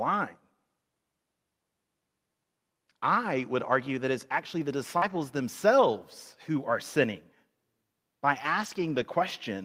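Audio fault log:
4.97–5.04 s, short concealed packet loss: Just after "that it's actually the", about 40 ms of sound briefly smears. That stretch never reached the decoder in time, so the receiver continued the preceding sound to fill the hole, then blended back into the real audio before "themselves who are sinning".
5.02–5.20 s and 8.62–9.04 s, lost packet rebuilt from error correction: Two stretches of about 100 ms and 220 ms turn rougher and noisier, with no gap. Each lost packet was replaced by the lower-bitrate backup copy carried in the packet after it, which the Opus decoder at 40 kbps played in its place.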